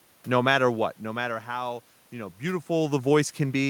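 No technical faults are audible.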